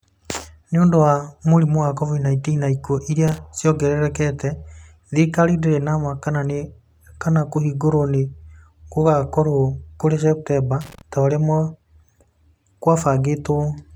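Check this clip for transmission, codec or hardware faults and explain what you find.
There's a hardware fault here: loose connector crackle, twice. The first burst runs from 3.28 to 3.38 s, just before "ciongererekete thirikari ndĩrĩ na", and the second from 10.81 to 11.01 s. A worn or dirty contact somewhere in the chain is making and breaking as it shifts, chopping the speech into fragments, with pops where any DC on the line jumps. You hear it as short, ragged scratchy crackle.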